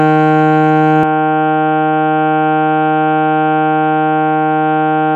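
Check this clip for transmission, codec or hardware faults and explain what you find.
From 1.03 s to the end, the music turns dull and boxy, with nothing above 3.8 kHz and a drop of about 5 dB. The likely cause is the input switching to a poorer device.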